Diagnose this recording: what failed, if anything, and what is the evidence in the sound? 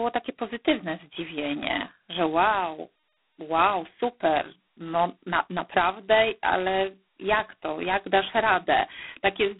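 The codec stage failed: G.726 ADPCM at its lowest rate, which fits 16 kbit/s, quantises each prediction difference too coarsely. Throughout, the speech carries a harsh, rasping hiss that rises and falls with its level, within a telephone band of 250 Hz to 3.5 kHz, with nothing above 4 kHz.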